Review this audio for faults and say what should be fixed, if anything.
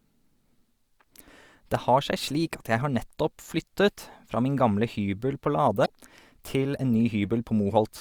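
Damaged data in a compressed stream: a stretch of the compressed speech was corrupted, so the decoder misread the frames there, lost sync and had to search for the next valid frame header before playback could resume. The result is a brief glitch from 5.82 to 5.90 s, about 76 ms long, right after "min gamle hybel på". To prevent it, verify the file or stream with frame checksums and re-fetch or replace any corrupted segments before decoding.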